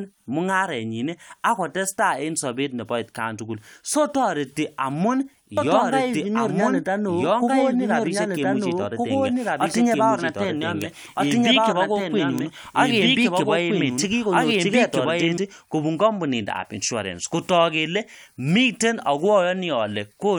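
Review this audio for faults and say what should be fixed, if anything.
From 5.57 s to 15.37 s the speech plays twice: an equally loud, full-band copy trails about a second and a half behind, switching on and off abruptly with no echo tail. This doubled audio track likely comes from a second, slower capture path feeding the same mix. To prevent it, route only one capture of each source into the mix and monitor for duplicate inputs.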